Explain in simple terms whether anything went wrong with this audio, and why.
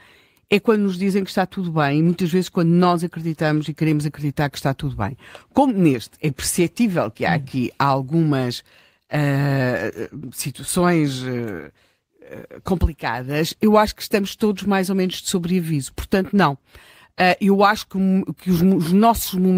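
Nothing went wrong here; the speech comes through steadily all the way, with no dropouts, glitches or odd sounds to point to at any moment.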